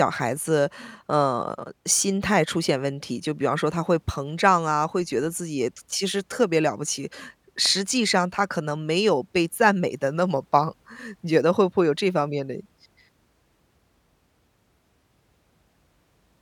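At 7.66 to 7.68 s a loud pop, likely a voltage spike from a switch or static, cracks a few dB above the speech: a vertical full-band stripe, one spike on the waveform.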